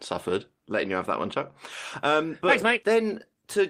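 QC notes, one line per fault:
Nothing stood out on listening to the speech in this clip.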